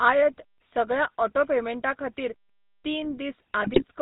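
Speech runs through the GSM full-rate codec throughout, with a buzzy, gravelly roughness and nothing above 4 kHz, pointing to 13 kbps coding rather than clean band-limiting. From 3.6 to 3.84 s, GSM bit errors corrupt the decoder's filter and gain values, causing squawks and gargling rather than the silent gaps of dropped packets.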